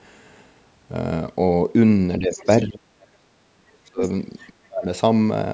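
Speech suppressed in double talk first appears at 2.19 to 2.41 s. The talker's level sags by roughly 10 dB for about a fifth of a second, most likely because an echo canceller, faced with both ends talking at once, could not separate this voice from its own loudspeaker echo and turned everything down. Overlapping it, from 2.32 to 2.57 s, the other side's voice leaks through. A faint second voice, around 20 dB below the talker, likely slips past the canceller's incomplete echo removal. The worst suppression runs from 2.63 to 4.01 s, where the speech dips, falling as much as about 40 dB, close to silence at its deepest. A briefer leak at 4.38 to 4.5 s brings that second voice back more quietly, roughly 30 dB down. A final suppression at 4.6 to 4.85 s chops the talker again by around 30 dB.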